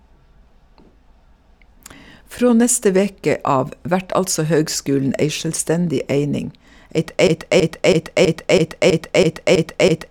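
At 7.27 s the speech stops progressing and a single fragment of about 0.33 s begins repeating back to back, a broken-record loop that runs nine times and continues to the end of the clip. The repeats are identical, giving a rigid, stuttering rhythm with no new material. The likely cause is a stalled player or stream that kept re-sending the last fragment it held, so the audio due in those final seconds is lost.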